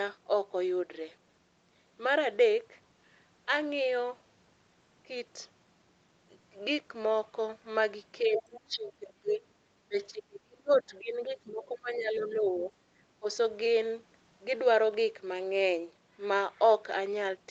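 Speech suppressed in double talk first appears from 8.21 to 9.4 s, when the talker's level sinks by around 20 dB and the speech thins and breaks up. The likely cause is that both sides spoke at once, and the echo canceller, unable to tell the talker's voice from the loudspeaker echo, attenuated everything. A longer stretch follows from 9.88 to 12.7 s with dips of roughly 25 dB, and a brief 13.19 to 13.26 s dropout of about 20 dB.

The other side's voice leaking through overlaps those stretches. It is strongest at 8.35 to 8.6 s, about 10 dB below the talker, then fainter at 10.73 to 10.81 s, 11.49 to 11.64 s and 12.17 to 12.65 s, roughly 20 to 30 dB down. These are fragments of a second voice, likely the residue of loudspeaker sound the echo canceller failed to cancel, sitting inside the 8 kHz band of the call.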